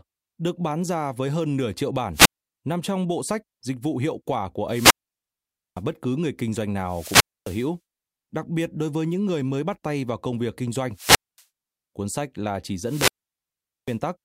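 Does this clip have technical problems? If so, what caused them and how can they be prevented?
Yes. Wireless microphone squelch dropout: the FM radio link faded until the receiver's squelch muted it, giving a hiss burst, then near silence, at 2.13–2.49 s (after "với hơn nửa triệu", before "nằm trong bộ sách", 0.24 s mute), 4.67–5.83 s (0.86 s), 6.80–7.73 s (0.26 s), 10.92–11.44 s (after "vào công việc kinh", 0.23 s) and 12.83–13.99 s (after "sách là chỉ", 0.80 s). Keep the transmitter in clear line of sight and close to the receiver, on a clean frequency, ideally with diversity reception.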